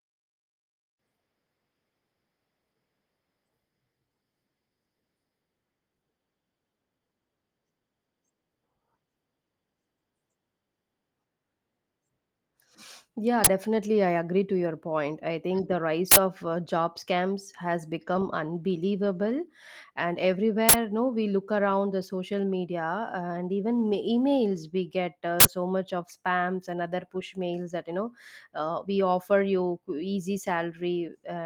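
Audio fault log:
13.44, 16.12, 20.69 and 25.40 s, uninitialised buffer: four short, loud bursts of digital noise. The first, just before "I agree to your", lasts about 24 ms, fitting a 1024-sample block. The others last about 46 ms, fitting 2048-sample blocks: between "point I think the" and "of uh job scams", just before "no we look around", and at 25.40 s. Each happens because a block was played before audio was written to it, so leftover memory came out as samples. Unlike a dropout, the block is filled with harsh noise rather than silence, and unlike a click it fills the whole block. The 24 kbps Opus speech on either side of each burst shows only light coding damage.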